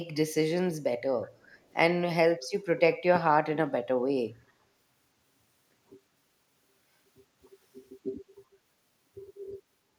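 From 1.29 to 1.58 s, a faint delayed copy of the speech surfaces behind the direct signal. It trails by 371 ms and sits about 30 dB below it. This is an echo leak, likely from a far end on loudspeaker whose echo canceller let residual microphone pickup through and sent it back down the line. It is short and very low in level, so it comes across as a faint ghost of the earlier speech.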